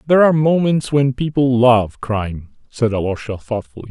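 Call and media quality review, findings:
Nothing stood out on listening to this speech recording.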